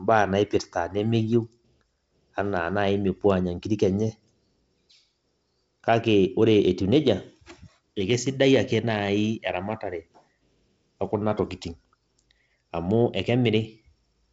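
Speech, with no technical faults to report.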